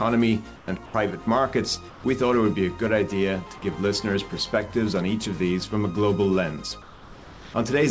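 Comfort noise in place of the background appears four times: 0.56–0.68 s, 0.86–0.94 s, 1.90–2.04 s, and a longer stretch at 6.82–7.54 s. In each gap, the quiet background, sitting about 20 dB below the loud passages, turns into a flat, featureless hiss that is about 3 to 6 dB quieter, then the real background returns with the sound. The likely cause is discontinuous transmission, with the receiver synthesising noise while the sender is silent. Across the clip, nothing is heard above 8 kHz, which fits a wideband call codec.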